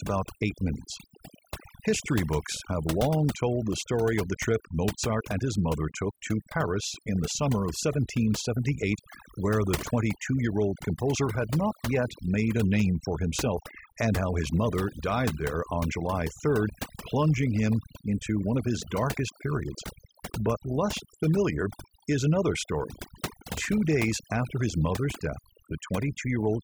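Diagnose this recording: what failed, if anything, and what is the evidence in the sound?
Overdone noise removal at the call-processing stage runs through the whole speech recording. Background gaps drop to near silence with twinkling specks. A spectrogram shows isolated flickering bins and holes carved through the quieter speech harmonics.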